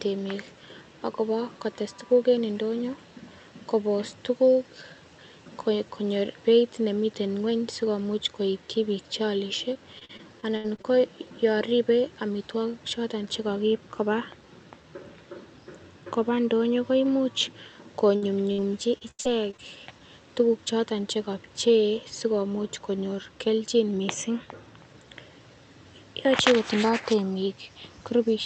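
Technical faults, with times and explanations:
9.73–10.86 s: repeated packet loss (robotic sound). Eight gaps hit the speech here, the longest about 74 ms. About 240 ms of speech is lost, and about a fifth of the stretch is concealment. The receiver fills each hole by extending the last sound. The patches recur quickly, so the speech turns choppy with pieces missing.
18.16–18.24 s and 18.52–18.60 s: burst of packet loss. Each burst removes about 60 ms of speech. The receiver holds the last sound and fades it across the hole. A voiced sound becomes a brief buzz. An unvoiced one becomes a fading hiss. Speech then resumes further along with the middle missing. Behind the bursts, the Opus call path limits the bandwidth to 8 kHz.
18.98–19.60 s: repeated packet loss (robotic sound). Five gaps, the longest 80 ms, remove about 180 ms, and 29% of the span is filled in. The dense patching gives a choppy texture with pieces missing.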